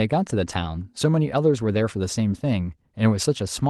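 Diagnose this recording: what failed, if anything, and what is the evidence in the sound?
Nothing failed in this recording.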